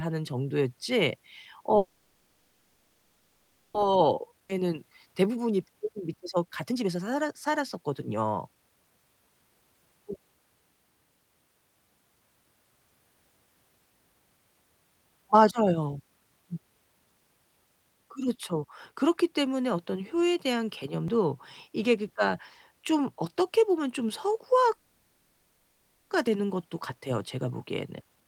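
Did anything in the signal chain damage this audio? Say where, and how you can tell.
Yes. In the network stage, a call audio freeze at 1.77–3.76 s and 24.74–26.13 s holds and fades the last sound instead of going silent, then resumes intact. Packets were likely delayed until the jitter buffer emptied.

A jitter buffer speed-up at 3.92–8.91 s (115%) and 26.94–28.27 s (113%) hurries the speech at unchanged pitch. Repeated pitch-period cuts work off the built-up delay.

A skip ahead at 4.48–4.51 s jumps about a second forward almost seamlessly. Audio was dropped, unlike a freeze, which adds time and loses nothing.

A dropped buffer (overrun) at 21.08 s and 26.27 s jumps as roughly 20 ms vanishes, likely from the driver missing samples. It is far shorter than the skip ahead.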